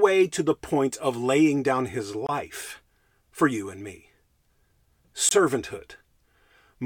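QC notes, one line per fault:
2.27–2.29 s and 5.29–5.31 s: gap between chunks. Two 23 ms holes cut into the speech, the first just after "of laying down his". They sit 3 s apart, which fits 3-second chunks joined with silence between them. No speech is lost.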